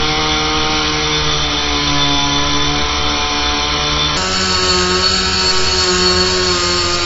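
From the start, the sound is dull and smeared, with a warbling, fizzy texture. This is plainly audible AAC compression, likely AAC-LC at a low bitrate near 24 kbps. The coder cuts the top band and quantises coarsely.

At 4.17 s the section switches to the wrong speed and stays there until the end at 7.05 s. It plays 1.26 times too fast, likely because it was clocked at the wrong rate. Pitch rises about four semitones, and everything sounds higher and hurried.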